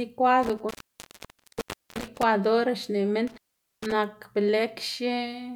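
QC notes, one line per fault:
0.43–2.23 s and 3.27–3.93 s, intermittent contact: the speech drops out twice, for about 1.25 s and then 0.45 s, with crackle where a loose connection breaks and remakes, and faint hiss audible while the signal path is open.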